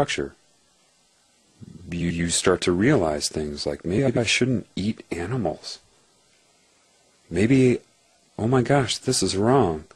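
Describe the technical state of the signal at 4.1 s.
Frames out of order, from 3.98 to 4.18 s, so 4.1 s falls inside the disturbed stretch. Two adjacent blocks of about 92.9 ms each were swapped in the decoded stream, a size that fits runs of four frames apiece. The later block plays first and the earlier one follows. The sound turns into a brief garbled flutter. No time is lost, and the timing after 4.18 s is unaffected.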